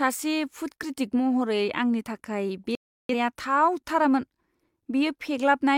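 A speech recording with a digital broadcast dropout from 2.75 to 3.14 s: the receiver stopped getting usable frames and muted, so the sound drops to silence for roughly 0.4 s and returns further along in the programme, with the missing stretch simply gone. Unlike an analogue signal fade, the gap is clean silence rather than hiss or crackle rising through weakening audio, and its length fits a short run of lost frames.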